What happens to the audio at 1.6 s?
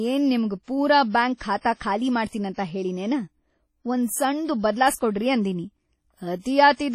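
From 1.61 to 1.65 s there is pre-echo: about 40 ms of hiss runs ahead of a sharp onset, because the transform block's quantisation noise spreads back into the quiet before the attack, softening it. Around it the sound is washy and ringing with breathing hiss and nothing above 15.7 kHz, likely from heavy WMA compression at a low bitrate near 32 kbps.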